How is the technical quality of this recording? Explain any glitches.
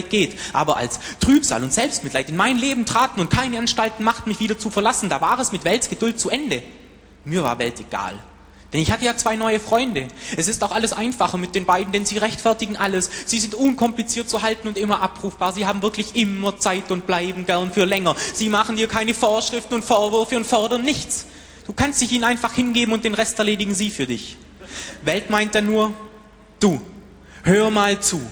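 Technical quality is compromised by one fault running through the whole recording. A block size mismatch with padding is present from start to finish: one processing stage delivers blocks slightly shorter than the following stage reads, and the shortfall in each block is filled with silence. Those tiny gaps repeat at about 43.1 Hz, which fits a 1024-sample read block, producing a low, steady buzz under the sound. Because the gaps are so brief, the audio runs only marginally slow, at 0.999 times normal speed.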